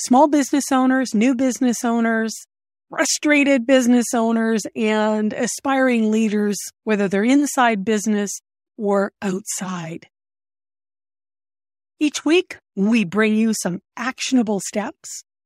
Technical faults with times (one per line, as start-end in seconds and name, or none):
none